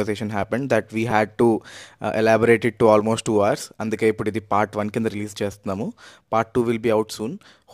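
A brief click with a buzzy edge at 1.11 s, and a single click at 5.52 s, interrupt the speech. Both are a repeated buffer fault. New audio failed to arrive in time, so the playback device replayed its last chunk, about 5 ms long, at each hard join. It replayed twice at 1.11 s, giving the buzzier texture, and once at 5.52 s. The stream then resumed with little or no audio lost.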